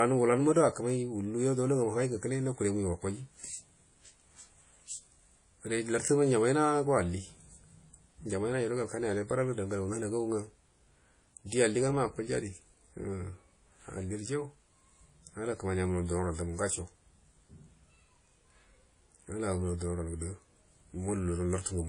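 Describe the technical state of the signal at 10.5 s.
At 10.5 s the speech carries WMA compression, which runs through the whole clip. The ringing, washy character and the hiss that swells and fades with the voice point to a transform codec spreading quantisation noise over long blocks, likely WMA at a low rate around 32 kbps. Weak spectral detail is discarded, and nothing remains above about 10.1 kHz, so the top end sounds dull and smeared.

Clock slip clicks are also present at this moment, part of a train running from 0.14 s to 21.85 s. A faint, regular ticking recurs roughly every twentieth of a second and merges into a soft rattle, most noticeable on louder sustained vowels. This is likely two devices on unsynchronised clocks, about 400 ppm apart, so a single sample is dropped or repeated each time the drift adds up to a whole sample.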